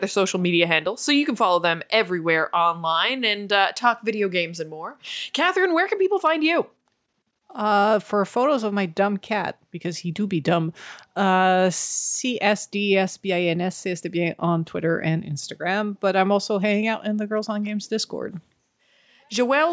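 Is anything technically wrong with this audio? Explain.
No, nothing is technically wrong.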